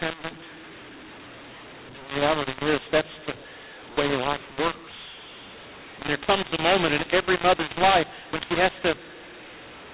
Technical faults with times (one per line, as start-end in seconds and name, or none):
0.00-9.94 mu-law and A-law mixed up